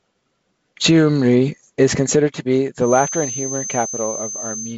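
From 2.78 s to the end, a feedback whistle runs behind the speech. It is a thin, steady tone near 6.2 kHz, roughly ten decibels below the speech, swelling and fading slowly in level. The likely cause is a loudspeaker-to-microphone loop poised just at the point of feedback.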